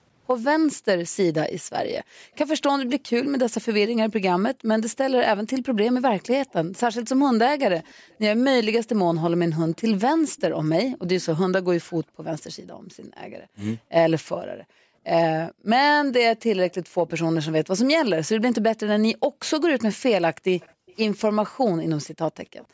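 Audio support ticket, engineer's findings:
Background gated by the echo canceller, 2.04–4.65 s: room tone dips up to about 40 dB, roughly 0.4 s in total. Echo canceller suppression clamping the mic during far-end playback. Unlike a noise gate, the drops follow loudspeaker activity, and the background returns on release. Same symptom at 12.04–15.66 s (about 1 s affected) and 19.21–22.74 s (about 0.3 s), each up to about 40 dB deep.

Echo leak, 6.5–11.25 s and 16.69–22.66 s: faint delayed copy of the speech, 289 ms behind, around 30 dB below the direct signal. Likely an incomplete echo cancellation residual from the loudspeaker side being returned. Unlike room reverb, this is a discrete repeat at a fixed lag, not a diffuse decaying tail. It overlaps the last gating episode. The mic-chain band limit at 8 kHz is normal call processing.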